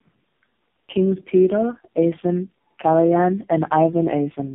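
Throughout, tandem speech coding: the speech passed through several narrowband codecs in a row, likely ending in AMR-NB, so it sounds rough, muffled and warbly. The spectrogram is empty above 3.8 kHz.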